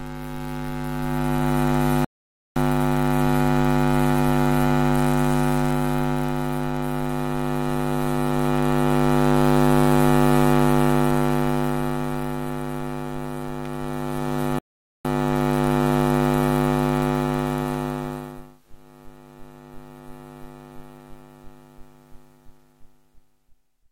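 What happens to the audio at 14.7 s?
At 14.59 s the sound drops to silence in a rebuffering stall: playback ran out of downloaded audio and paused until more arrived, resuming at 15.05 s exactly where it left off. Unlike a dropout, nothing is skipped; the gap simply adds 459 ms.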